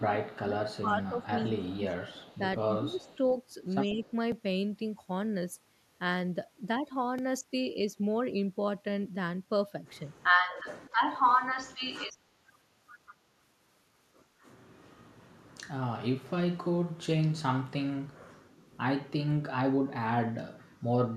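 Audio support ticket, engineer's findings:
Speech suppressed in double talk at 0.0–0.1, 0.48–1.92, 2.78–3.08 and 3.94–4.01 s: level dips up to about 20 dB. Likely the far-end echo canceller ducking both talkers during overlap.

Echo leak at 0.25–0.39, 0.73–2.38, 2.93–3.17 and 3.89–4.11 s: faint copy of the speech 151 ms late, about 25–30 dB down. Likely residual loudspeaker echo that the canceller failed to remove.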